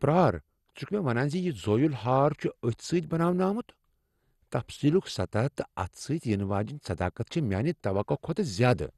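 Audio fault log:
throughout, MP2 compression: dull, gurgling, granular speech with nothing above 12.2 kHz, likely low-rate MPEG Layer II coding, fitting about 64 kbps, switching off starved upper sub-bands.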